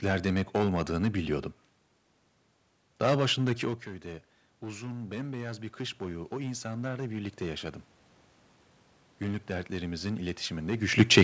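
Hard clipping runs through the whole clip. The speech is driven about 12 dB past what one stage can pass, so a few percent of the samples hit the ceiling and are cut flat. Every loud syllable takes on a harsh, gritty fuzz. On a waveform the peaks sit as flat plateaus. On a spectrogram each loud moment throws vertical smears of added harmonics up toward the 8 kHz top of the band.

Automatic gain rising begins at 3.62 s, just after the talker moves back from the microphone at around 3.5 s and the input falls by about 14 dB. The gain control reacts slowly, lifting its gain by about 8 dB over the span to 7.77 s. Voice and room noise swell up together. The waveform envelope climbs steadily across those four seconds, and on a spectrogram the noise floor brightens along with the speech.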